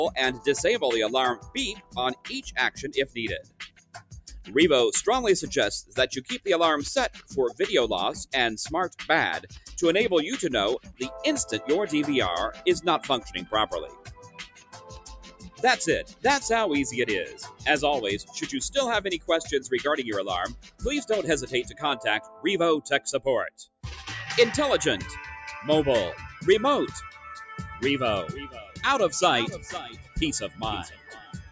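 Across the whole clip the level pumps and flutters, with held sounds and tails sinking while attacks push through, a swing of about 10 dB. A noise suppressor built for speech, applied to music or sounds, is mistaking steady tones and ambience for noise.

Within that, the noise suppressor cuts sound harder in eight stretches: 0.38 to 4.54 s, 5.83 to 9.72 s, 10.79 to 11.0 s, 12.53 to 16.24 s, 17.26 to 19.29 s, 20.58 to 23.85 s, 26.28 to 27.53 s, and 28.48 s to the end. Sustained or decaying parts drop away by up to about 19 dB, for a second or two at most within each stretch, because the suppressor treats them as noise. The band-limited top end, with nothing above 8 kHz, comes from the call's microphone processing.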